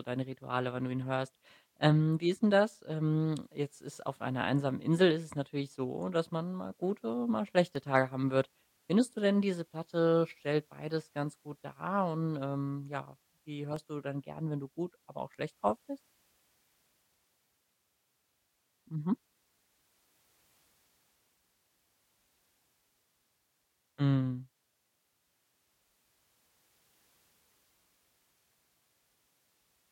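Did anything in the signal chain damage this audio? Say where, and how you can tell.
Yes. At the codec stage, corrupt frame decoded: brief chirpy blips at 13.71–13.74 s and 15.68–15.70 s, peaking near -30 and -20 dBFS. Damaged bits were decoded as-is, spraying energy at wrong frequencies for a few frames. Unlike loss concealment, nothing fades or repeats.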